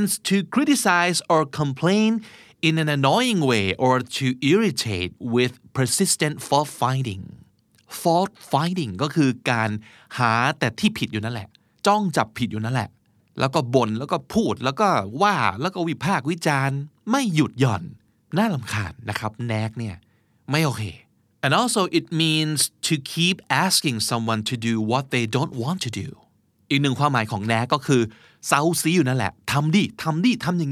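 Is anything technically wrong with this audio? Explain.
No, nothing technically wrong stood out on listening to this recording.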